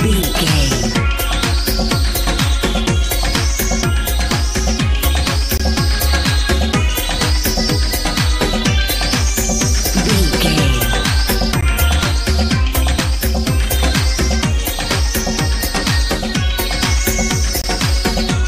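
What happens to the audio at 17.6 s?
At 17.62 to 17.64 s there is a gap between stream segments: a hole of about 23 ms of digital silence with abrupt edges on both sides. It comes from a timing mismatch at a segment boundary. The time stamps of two consecutive segments leave a small gap, and the player fills it with silence instead of joining the segments seamlessly. No audio is lost. The silence is inserted, pushing everything after it later by roughly 23 ms, and it is heard as a brief, sharp dropout.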